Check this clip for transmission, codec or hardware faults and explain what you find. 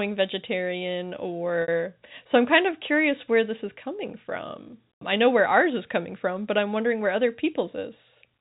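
One transmission fault turns up in this speech clip: packet loss with pitch repetition from 1.62 to 1.68 s. About 60 ms of audio went missing, likely a couple of packets, and the receiver covered the hole by repeating the last pitch period, so you hear a brief held, slightly buzzy stretch before the speech resumes. The G.711 telephone coding underneath keeps everything below 4 kHz.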